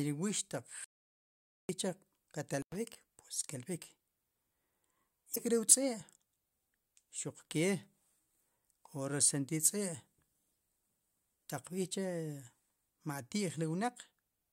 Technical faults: audio dropout to silence; intermittent contact; damaged data in a compressed stream

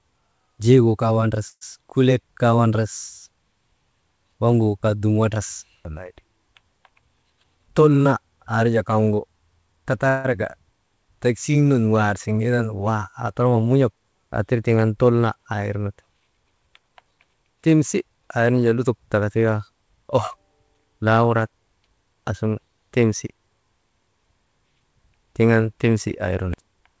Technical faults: call audio freeze; jitter buffer speed-up

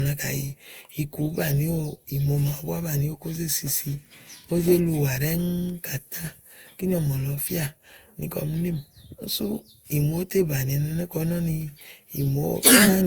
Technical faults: generation loss

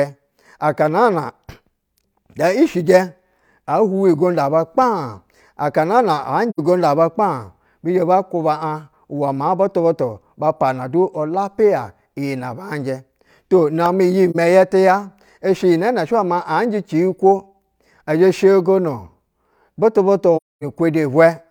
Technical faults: AAC frame loss with muting; repeated buffer

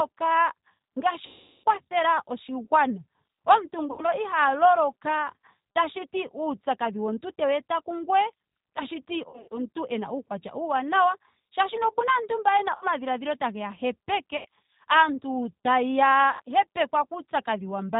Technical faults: G.729 codec; VoIP packet loss concealed by the speech codec

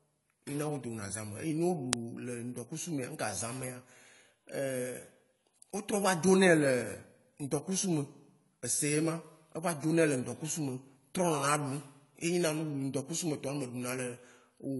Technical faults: AAC compression; uninitialised buffer

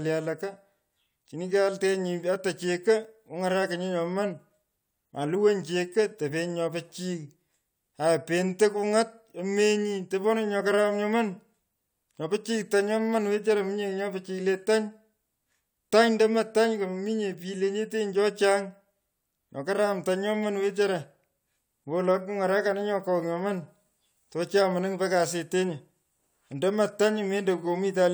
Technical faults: none

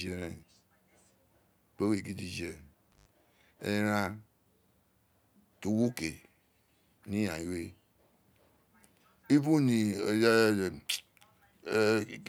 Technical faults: intermittent contact

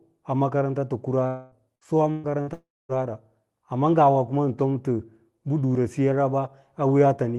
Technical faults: long network dropout; burst of packet loss

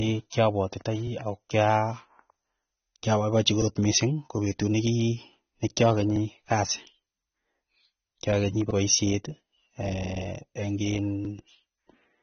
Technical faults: low-bitrate audio saved at a high bitrate

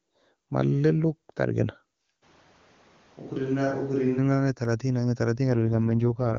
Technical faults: switch to a distant microphone; AMR rate drop

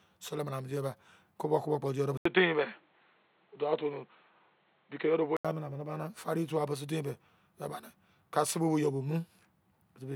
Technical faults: input switched to a poorer device

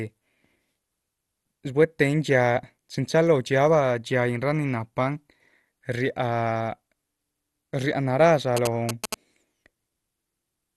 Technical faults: MP2 compression; GSM signalling bursts

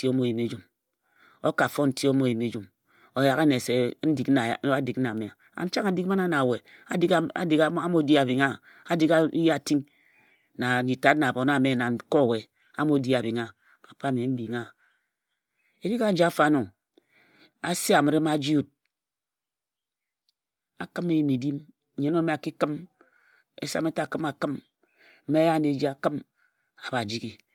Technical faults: Bluetooth LC3 compression

